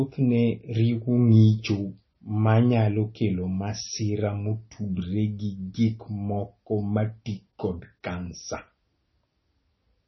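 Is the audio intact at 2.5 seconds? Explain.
No, at 2.5 seconds the speech carries heavy artefacts, and they run through the whole clip. It's most likely MP3 compression starved of bits: nothing survives above about 5.9 kHz, and weak detail flickers frame to frame, giving a watery, swirly edge, which fits a bitrate around 25 kbps.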